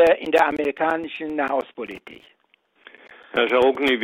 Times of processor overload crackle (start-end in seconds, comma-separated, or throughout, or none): 1.86-2.29